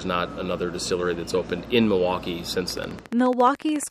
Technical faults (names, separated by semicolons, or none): train of clicks